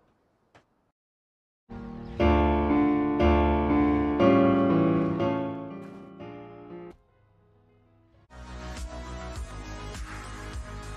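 Zipper noise runs from 5.00 to 5.90 s as the level drops by roughly 20 dB in 1 dB steps, about twenty per second, each step ticking audibly. Unlike a smooth fade, the gain jumps unsmoothed, so the ticks ride on the sound throughout the drop.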